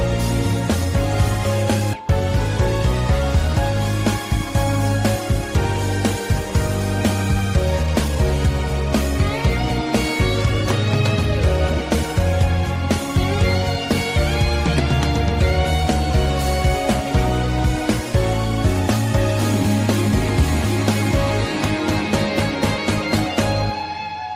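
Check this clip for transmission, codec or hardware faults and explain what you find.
Two kinds of fault turn up: one forward skip and two brief stretches of jitter buffer speed-up.

At 1.93 to 2.04 s the audio jumps abruptly forward, with almost nothing bridging the join and roughly 0.7 s of sound simply gone. This is a skip ahead. Later audio was already queued, and a chunk ahead of it was dropped, either lost in transit or discarded when the jitter buffer overflowed. The two sides were then spliced nearly directly, and latency fell by about the same amount.

From 3.48 to 4.51 s the sound runs slightly fast, about 103%, with no change in pitch. From 7.56 to 8.16 s it is noticeably rushed, about 115%. This is jitter buffer speed-up. The buffer had built up more audio than its target, so the receiver repeatedly cut out short slices of one or a few pitch periods to drain it. That trimmed around 40 ms from the first stretch and around 100 ms from the second.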